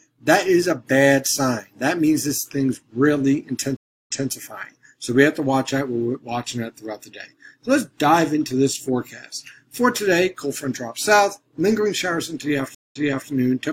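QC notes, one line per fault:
3.77–4.30 s, stream reconnect: about 0.3 s of silence, then audio resumes roughly 0.23 s earlier, repeating a moment; a fresh decoder restarted mid-stream after the connection dropped.
12.75–13.29 s, stream reconnect: a shorter gap of about 0.17 s, then playback jumps back roughly 0.37 s; the broken connection was re-established and decoding restarted from a resent burst.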